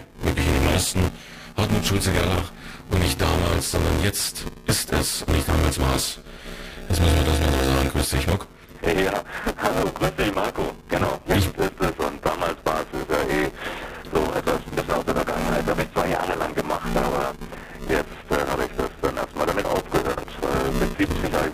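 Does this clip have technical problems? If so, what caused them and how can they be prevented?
Yes. The program filling the playback ring buffer and the hardware draining it have drifted out of step, so their positions cross inside every period. This is buffer tearing, and it runs through the whole clip. In each buffer, roughly a third of the samples are stale audio from around 10 ms earlier, with hard joins on either side. These joins recur 200 times a second, giving a steady robotic buzz at 200 Hz that is present wherever there is signal. To prevent it, keep the writer a safe margin ahead of the read pointer, sized with enough latency headroom to absorb scheduling jitter.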